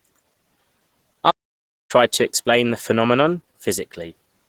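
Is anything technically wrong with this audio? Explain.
Yes, two faults are audible.

Throughout the speech there is plainly audible Opus compression damage, likely from a very low bitrate near 16 kbps in the hybrid mode, which codes the lower band as speech and fills the upper band coarsely. The result is hoarse, grainy speech, though content still reaches about 20.2 kHz.

From 1.30 s to 1.91 s a playback stall cuts the output to silence for about 0.59 s. The player likely ran short of data or was blocked before recovering. The speech then resumes abruptly with "to explain".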